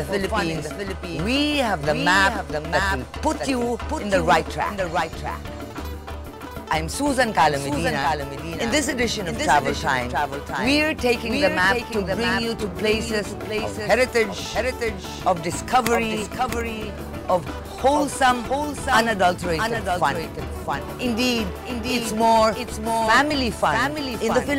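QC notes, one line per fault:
Throughout: doubled audio track. A second, full-band copy of the sound runs about 0.7 s behind the original, roughly 5 dB quieter, so every event is followed by a clean repeat. The echo has no decay tail and no room colouring, which separates it from a reflection. The likely cause is the same signal reaching the mix twice, once through a slower capture path or an edit that left two copies offset in time.
16.22 s and 23.30 s: dropped buffer (overrun). Each is an abrupt jump in the sound with no silence, because the missing stretch is simply skipped and the audio on either side is butted together. The gap is only a few milliseconds at 16.22 s and nearer 10 ms at 23.30 s. Likely cause: samples not collected before the hardware overwrote them.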